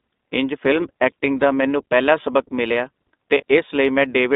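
Throughout, the speech carries plainly audible iLBC codec coloring: band-limited to about 250 Hz–3.7 kHz, slightly rough and synthetic, with the independent 20 ms framing and a sound that fits the 15.2 kbps mode.

From 3.38 to 3.43 s, just after "ਮੈਨੂੰ ਪਹਿਲਾ ਸਬਕ ਮਿਲਿਆ", lost iLBC frames cause a brief buzzy, held vowel instead of silence, which fits a single concealed frame. The speech recovers immediately afterward.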